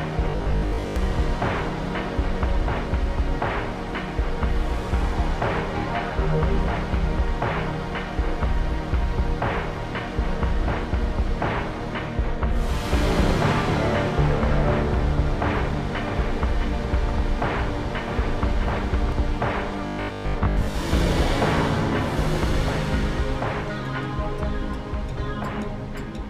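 A rigid, metallic buzz pitched at 50 Hz is heard from 0.30 to 0.96 s and again from 19.87 to 20.75 s. This robotic sound is likely caused by repeated short buffers: a 20 ms chunk looping while most of the real audio is skipped.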